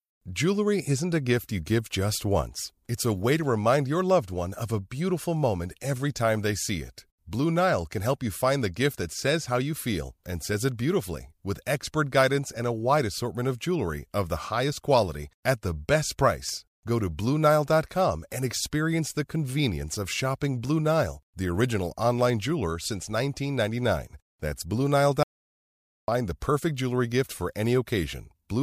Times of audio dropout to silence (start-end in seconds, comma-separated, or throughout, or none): 25.23-26.08